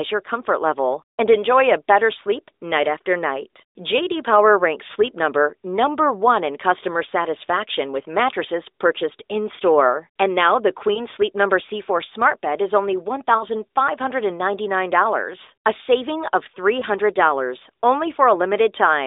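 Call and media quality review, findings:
Lost AMR speech frames: brief dips/warbles at 10.94 s (after "now the"), 13.38 s (after "smart bed is only"), 16.80 s (after "a saving of"). Each fits one 20 ms frame failing checksum on the radio link; AMR-NB decoder repeats last good pitch/vocal-tract parameters at reduced gain. Band-limited 300 Hz–3.7 kHz.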